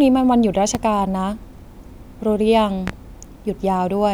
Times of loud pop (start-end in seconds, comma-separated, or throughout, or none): 0.75-0.79, 2.87-2.91